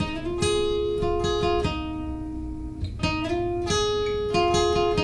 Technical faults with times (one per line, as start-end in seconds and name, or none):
none